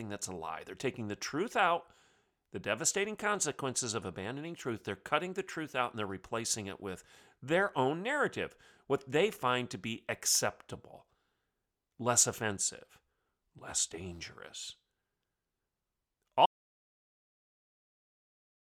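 At 16.46 s the speech cuts out mid-flow into silence for the last 2.24 s, an audio dropout to silence, likely from lost input while recording continued.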